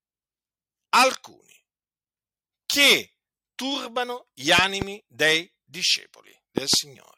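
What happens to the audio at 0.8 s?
Nothing goes wrong at 0.8 s; the speech there is intact.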